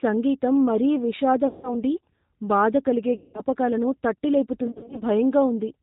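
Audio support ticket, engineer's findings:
G.729 codec, whole clip. Speech band-limited, nothing above 4 kHz. Rough, synthetic texture, plainly audible. Points to the 8 kbit/s G.729 family. Speech rebuilt from a vocal tract filter, pitch predictor and sparse pulses per 10 ms frame.

VoIP packet loss concealed by the speech codec, at 1.47–1.76 s, 3.16–3.41 s and 4.67–5.03 s. Speech smears into fading buzzy tone, then recovers weak. About 160, 180 and 200 ms lost. Third gap scattered over roughly 340 ms, runs up to 50 ms. Decoder extrapolating last pitch and filter.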